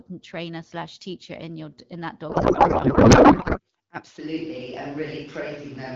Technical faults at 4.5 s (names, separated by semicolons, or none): switch to a distant microphone